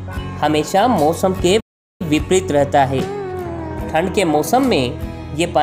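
At 1.60 s the audio just cuts out mid-flow and stays silent until 2.02 s, a gap of roughly 0.40 s, before sound picks up again. That's a playback stall: the player most likely ran dry of buffered data, or its output thread got held up, so nothing reached the output until it caught up. It's a clean drop to silence rather than a click or a smear, long enough that you notice the hole.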